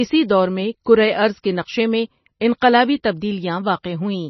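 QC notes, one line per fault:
throughout, MP3 compression: the speech sounds watery and swirly, with nothing above 6 kHz and smeared onsets. This is likely from an encoder starved of bits, fitting around 24 kbps, that cuts the treble at a fixed point and toggles weak frequency lines between frames.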